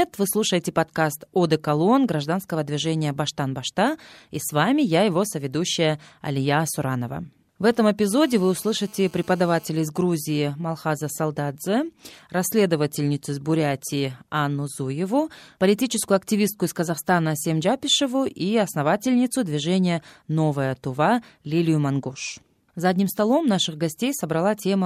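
GSM phone buzz runs through this speech recording from 8.10 to 9.68 s: a hard, raspy 217 Hz drone packed with harmonics, sitting about 29 dB below the speech and unrelated to it. A 2G phone on an active call nearby was transmitting in bursts 217 times a second, and the audio circuitry rectified those radio pulses into this steady buzz. GSM signalling bursts follow from 9.77 to 11.93 s, ending just before "расследовательницу из". They are a much fainter run of even ticks with a longer 217 Hz buzz twice a second. A 2G phone, still on its call but with its user silent, sent only short groups of radio bursts, and each group was rectified into one of these clusters.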